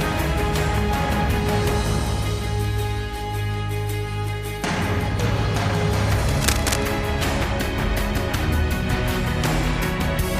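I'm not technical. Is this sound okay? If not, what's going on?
No. A cable or connector was likely loose or worn and got moved, so the electrical contact kept flickering. That's the cable scratch noise you hear from 6.1 to 6.84 seconds: a burst of fairly loud, uneven scratching or rustling laid over the sound.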